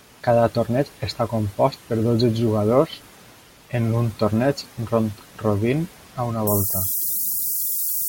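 From 6.47 s to the end at 8.09 s, low bit depth with noise shaping: 4-bit quantisation, error pushed upward, gives a thin, treble-heavy hiss roughly as loud as the speech.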